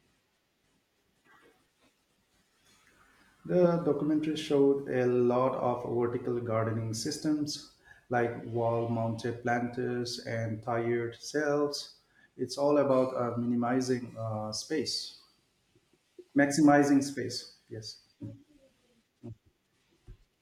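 Nothing here needs flagging: the speech runs along without any technical faults showing up anywhere in it.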